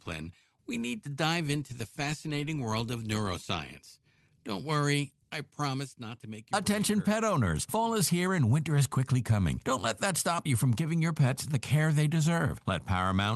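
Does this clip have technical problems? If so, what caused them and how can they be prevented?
No, there are no technical faults to report in this audio. It has passed through a WebRTC call path working as intended, and the top end stops at around 12 kHz, which fits an Opus call codec.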